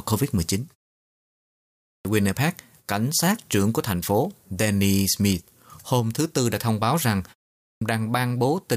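The playback device dozes off during silence and needs time to wake, so a clipped start after a pause follows at 1.80 s, after a 1.13 s gap, losing about 0.25 s, and again at 7.58 s, after 0.32 s, losing 0.23 s. The speech bursts in abruptly, missing its opening sounds.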